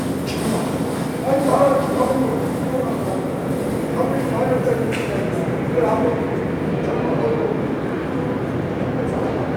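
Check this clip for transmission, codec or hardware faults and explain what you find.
No faults turn up anywhere in the clip.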